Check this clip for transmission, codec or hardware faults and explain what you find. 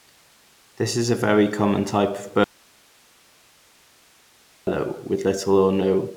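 One fault is audible: an audio dropout to a faint residue from 2.44 to 4.67 s. For about 2.2 s the speech cuts abruptly to low hiss roughly 35 dB down, likely a lost link whose downstream path stayed live. The waveform collapses to a thin noise band; the spectrogram shows a sharp-edged gap with only faint broadband hiss.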